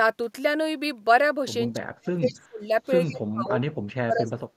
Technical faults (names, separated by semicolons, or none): speech suppressed in double talk